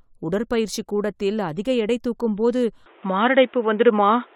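At 2.86 s everything above 3.8 kHz vanishes, level shifts about 5 dB and faint background noise appears: likely an input switched to a poorer device.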